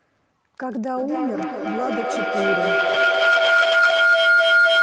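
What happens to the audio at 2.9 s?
At 2.9 s two things are stacked on each other. A feedback howl has been running since 0.97 s and carries on to the end of the clip. Two devices in the same room are on the call, so the microphone keeps picking up the loudspeaker and each trip round adds level. Instead of dying away, the repeats narrow to a tone around 1.5 kHz, with the loop coming round roughly every third of a second, peaking about 10 dB above the speech.

On top of that, a call bitrate drop starts at 2.8 s and lasts until 4.21 s, bottoming out for about 1.3 s. The connection's bandwidth estimate fell and the encoder was told to spend far fewer bits, so the speech comes through coarser, rough and watery, with the top end dulled. The step down sounds like roughly half the rate, something like 32 kbps falling to about 15 kbps.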